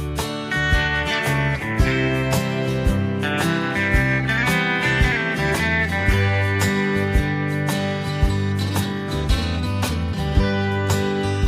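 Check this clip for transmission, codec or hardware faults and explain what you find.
Nothing stood out on listening to this clip.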